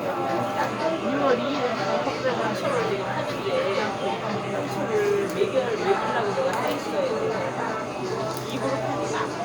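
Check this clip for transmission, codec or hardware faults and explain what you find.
Nothing in this recording of everyday sounds points to a transmission, codec or hardware fault. The audio runs without any break or defect that would trace back to the signal path.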